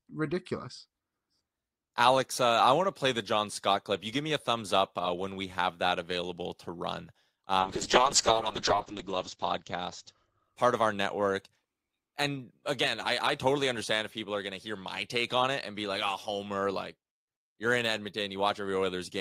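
Speech that, from 7.61 s to 11.09 s, turns rough, watery and muffled, with the top end shut off at about 8 kHz instead of reaching 20 kHz, and sounds worst for roughly 1.2 s before clarity returns. This is a call bitrate drop: the call's bandwidth estimate fell, so the encoder was told to code far more coarsely, consistent with a fall from around 48 kbps to about 6 kbps, and at that rate it also discarded the high frequencies.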